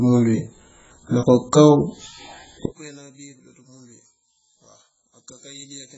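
From the start, the speech sounds dull and smeared. Nothing is heard above about 7.7 kHz. Sibilants turn fizzy, and sustained sounds warble. This points to heavy AAC compression, likely AAC-LC at a very low bitrate, which fits something near 12 kbps. At that rate the encoder cannot afford the upper spectrum. It lowers its cut-off, leaves gaps between bands, and fills some of them with substitute noise.

At 2.66 s the speech suddenly collapses and stays weak until the end. The level falls by about 26 dB. What remains is faint, with the centre of the sound gone. This is the mark of one channel inverted, likely a polarity flip on one side of the stereo pair. When the two channels are summed to mono, the shared centre content cancels. Only the small difference between them survives.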